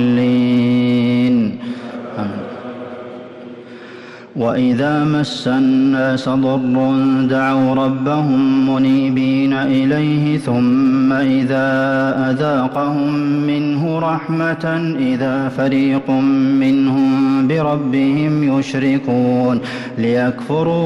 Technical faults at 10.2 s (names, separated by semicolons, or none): hard clipping